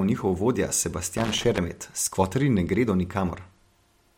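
At 1.17 s, right after "njihov vodja", a loose connector crackle breaks out and lasts until 1.58 s. A worn contact repeatedly makes and breaks, chopping the signal into an irregular scratchy burst. On a spectrogram this shows as ragged broadband vertical streaks, and the waveform shows spiky, gappy dropouts.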